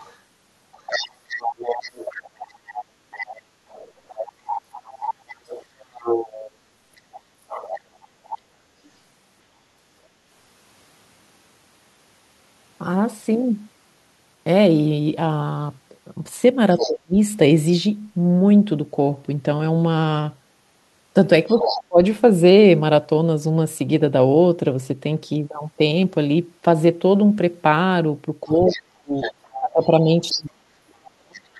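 From 0.0 to 8.89 s the other side's voice leaks through, roughly 10 dB under the talker, most likely from loudspeaker echo the canceller left in the microphone. On a spectrogram it shows as a fainter second set of harmonics under the main speech. At 8.41 s the background is gated by the echo canceller: for about a tenth of a second the room sound drops by about 6 dB, a brief notch in the waveform's noise floor.

At 16.75 to 16.91 s and again at 21.49 to 21.8 s, the leaking voice rises to about 5 dB below the talker. Speech is suppressed in double talk from 16.83 to 17.15 s (down about 40 dB) and from 21.55 to 21.99 s (down about 30 dB), likely because the canceller confused both voices and turned them down together.

From 28.45 s to the end, the same suppression cuts the talker by up to about 40 dB, for around two seconds in total. Leaked echo sits roughly 10 dB down from 28.66 to 31.4 s, as faint harmonics.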